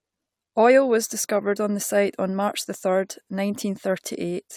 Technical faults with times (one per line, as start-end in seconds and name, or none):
none